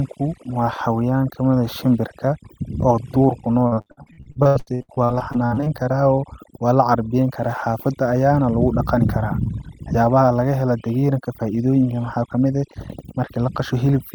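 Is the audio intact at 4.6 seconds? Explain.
No. Repeated packet loss (robotic sound) runs from 3.67 to 5.68 s. Lost or late audio is patched by extending the previous sound, so about 42% is filled in, with gaps up to 78 ms, giving choppy speech with pieces missing. Overdone noise removal throughout also cuts bands near the estimated noise, leaving the background lowered and broken into twinkling specks.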